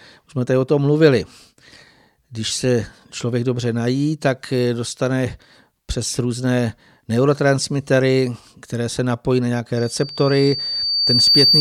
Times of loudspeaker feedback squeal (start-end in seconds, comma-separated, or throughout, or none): 9.76-11.61